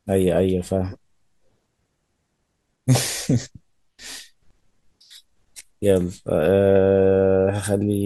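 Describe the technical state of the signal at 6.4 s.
At 6.4 s the speech signal is intact, with no audible fault at that moment.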